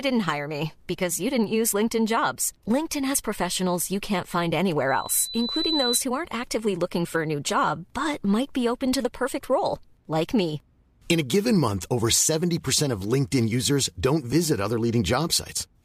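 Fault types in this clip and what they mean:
Loudspeaker feedback squeal: the microphone picks up its own loudspeaker, loop gain passes unity at 4 kHz, and that tone swells within a second to roughly speech level.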